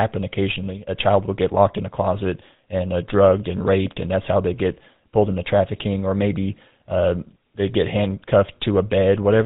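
From start to finish the speech carries a buzzy, gravelly roughness with nothing above 4 kHz, the mark of the GSM full-rate codec. It rebuilds the voice from a vocal-tract model fed by sparse, regularly spaced pulses, and at about 13 kbps that coarse excitation is plainly audible.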